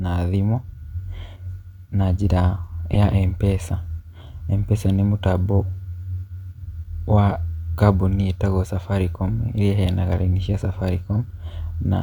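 A corrupt frame decoded at 2.93 to 2.97 s, right after "na njĩra", breaks into this speech clip as a short, harsh burst lasting about 40 ms and peaking loud, around -5 dBFS. Bits inside the compressed data were flipped, and the decoder still played the damaged frames, a handful in a row by the sound of it. The misread gains and codes put strong energy at the wrong frequencies, so the sound gives way to a sharp chirp of noise for the span of those frames.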